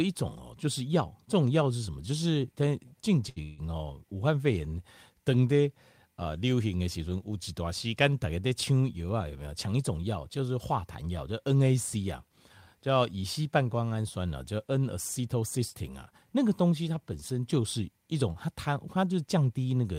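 At 3.29 s the speech hangs on one sound for 70 ms, held slightly too long with a faint buzz or dip, then carries on without losing anything. This is a short stall from a late packet: the jitter buffer ran dry, and the receiver stretched the last sound until the packet turned up.

Almost immediately after, from 3.42 to 3.60 s, a longer hold of about 160 ms follows, a continued buzz or hiss of the last sound that never drops to silence before the speech resumes where it left off. This call audio freeze likely comes from packets held up in transit emptying the jitter buffer, so the receiver padded the wait.

From 14.75 to 16.12 s the speech runs about 5 percent fast at an unchanged pitch, and from 18.35 to 19.73 s about 9 percent fast, sounding noticeably hurried. This is jitter buffer speed-up: with excess audio queued, the receiver trimmed small pitch-period pieces, roughly 70 ms and 150 ms in total, to reduce delay.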